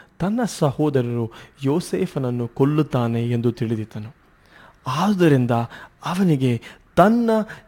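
Sample clock jitter runs throughout. An unstable converter clock, around a few microseconds, adds hiss about 35 dB below the speech, loudest on bright, loud sounds.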